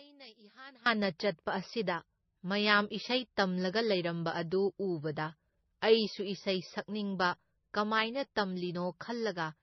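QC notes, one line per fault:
0.00 to 0.86 s, one channel inverted: the opening speech drops by about 23 dB and turns faint, then returns to full level. This is most likely one stereo channel with reversed polarity, heard through a mono sum. Everything the two channels share, including the centred voice and its low end, cancels when they are added together. Only the small difference between the channels survives, which is why the level falls so sharply.
Throughout, transcoding between lossy codecs: nothing above 6 kHz remains, and the speech carries layered artefacts from both codecs, heard together. The sound points to a low-rate MP3 of roughly 25 kbit/s that was likely re-encoded to AAC-LC at about 48 kbit/s. The later encoder cannot restore what the first one removed. It spends its bits reproducing the earlier damage and adds its own, so the low cut-off and both sets of artefacts carry through together.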